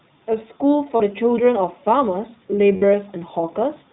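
The whole recording passes through the iLBC codec. Nothing above 4 kHz survives, so the speech sounds narrowband. Each 20 ms frame is coded on its own, and the result is plainly rough and synthetic, which fits the 15.2 kbps mode.

At 0.96 to 1.02 s come lost iLBC frames. About 40 ms is missing, which fits two frames. The decoder repeats the last pitch cycle with added noise, giving a brief buzzy, held vowel. Clean speech returns almost immediately.

At 2.76 to 2.84 s the same fault recurs. This gap is about 60 ms, consistent with three lost frames. The concealment stretches the held, breathy tone longer. Because frames stand alone, recovery is again nearly instant.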